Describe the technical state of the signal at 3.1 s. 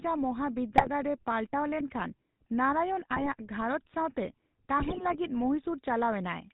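At 3.1 s GSM bit errors set in, running from 3.11 to 3.29 s. Corrupted bits in the decoder's filter, pitch and gain parameters make each damaged frame rebuild the wrong spectrum or jump in level, so the speech breaks into squawks, pops and gargling for that stretch. The damage fits about eight ruined frames and an error rate near 1.5 percent. On a waveform this appears as sudden amplitude spikes and blocky level steps. A spectrogram shows smeared, misplaced energy bands switching abruptly at frame boundaries.

Underneath, and present through the whole clip, is the GSM full-rate codec. Its vocal-tract model is driven by regular pulse excitation that keeps only every third sample, which gives the plainly audible buzzy, gravelly roughness. The coding fits 13 kbps GSM full rate. A spectrogram shows a hard ceiling at 4 kHz with nothing above it, along with coarse, grainy harmonic structure. On the waveform the excitation looks rough and pulse-like rather than smoothly periodic.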